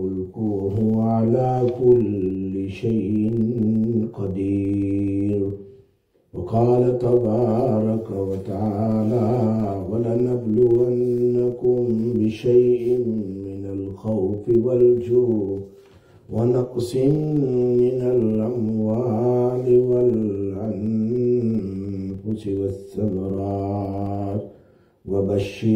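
A filter restarted on every block runs through the whole clip: the processing stage discards its internal state at each block boundary and begins again from silence, so every block opens with a small transient. Those transients repeat at about 23.4 Hz, which fits a 2048-sample block, and they are heard as a steady low buzz or rapid ticking under the sound, growing louder and softer as the signal's level rises and falls.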